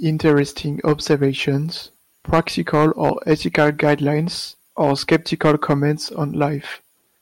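Speech with hard clipping in five places. The loud peaks are driven past what the signal path can pass, so the waveform tops are cut flat. The flat tops add harsh high harmonics. The worst stretches are 2.33 to 3.94 s, overdriven by about 8 dB, and 4.81 to 5.73 s, by about 7 dB. There the peaks turn to fuzz. Milder crackle comes at 0.26 to 0.40 s, 0.88 to 1.25 s, and briefly at 6.42 s.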